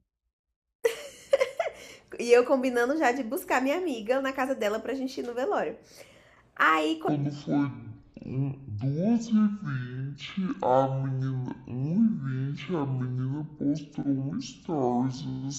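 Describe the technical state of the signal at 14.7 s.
Stereo read as mono is present at 14.7 s, within a fault running from 7.08 s to the end of the clip. The interleaved left and right samples are being taken one after another as a single channel. Each stereo frame becomes two mono samples, so the speech plays at 0.5x speed and a full 12 semitones lower, an octave down. A fainter mirrored copy of the sound also sits in the upper half of the spectrum.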